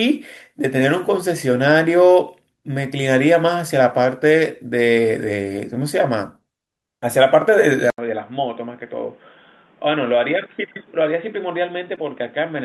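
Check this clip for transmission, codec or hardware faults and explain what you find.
Two faults stand out, both in the later part of the speech.

From 7.90 s to the end, the sound abruptly turns dull and boxy after a gap of about 80 ms. Everything above 3.8 kHz disappears, the level drops by a few decibels, and a new background hiss sits around 30 dB under the speech. Before the change, the call path carried content up to about 12 kHz, as expected for Opus. The likely cause is an input switched to a poorer device, such as a different microphone or a headset in call mode, with its own narrower band, tone and noise floor.

From 11.95 s to 11.99 s there is a brief disturbance, lasting about 30 ms. This is short concealed packet loss. About 20 ms of audio arrived too late to decode. The receiver filled roughly 13 ms of that gap by continuing the preceding sound, then crossfaded back into the real signal.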